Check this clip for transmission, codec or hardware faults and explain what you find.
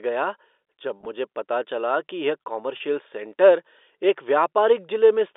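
Two brief dropouts show up in the speech, both packet loss with pitch repetition, heard through a telephone-band G.711 channel limited to roughly 300 Hz to 3.6 kHz.

At 0.98 to 1.06 s, just before "मुझे पता चला कि", about 50 ms of audio is missing, scattered over 80 ms in runs no longer than 20 ms. At 2.77 to 2.80 s, between "पता चला कि यह" and "सेंटर एक", a single 30 ms gap occurs, which fits a few consecutive lost packets. In each gap the receiver fills the hole by repeating the last pitch cycle, so both spots sound like a short, slightly buzzy held tone rather than silence.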